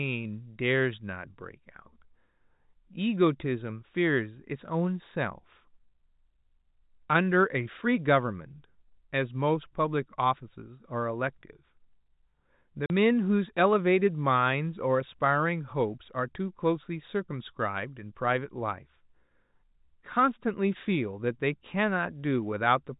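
Speech over a G.711 telephone path, so nothing above 4 kHz. At 12.86 s a 40 ms gap of silence cuts in. That is packet loss filled with silence, consistent with two lost 20 ms packets, with hard edges.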